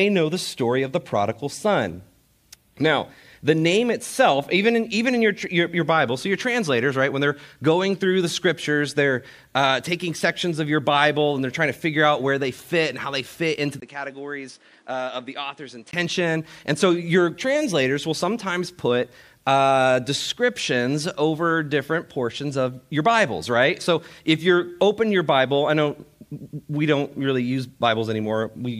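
At 13.80 s the sound briefly drops out for 20 ms, then turns dull and quieter, by roughly 10 dB. Nothing passes above 10.5 kHz, and a new, faint noise floor appears. This is likely an input switched to a poorer device. Full clarity returns at 15.93 s.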